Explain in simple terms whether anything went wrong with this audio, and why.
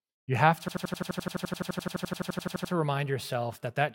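Something did go wrong. Right after "you have to", from about 0.68 to 2.73 s, the audio gets stuck and plays one tiny 85 ms slice about 24 times, roughly 12 times a second, before resuming at "remind yourself that that". This is a system hang loop: the computer briefly froze while the sound hardware kept replaying its last buffer, which fits a 4096-sample buffer. Unlike an ordinary stutter or dropout, every repeat is exactly identical, and the sound resumes with essentially nothing missing.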